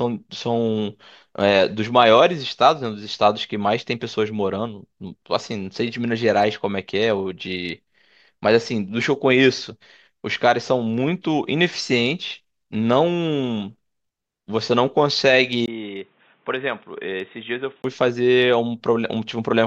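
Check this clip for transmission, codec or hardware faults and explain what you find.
One hardware-side fault is present. From 15.66 s to 17.84 s the speech turns dull and boxy. Nothing is heard above 3.8 kHz, the level drops by roughly 10 dB, and a new noise floor appears about 35 dB below the speech. A brief gap of about 20 ms marks the switch. This is likely an input switched to a poorer device, a narrower-band microphone or headset call profile with its own tone and noise.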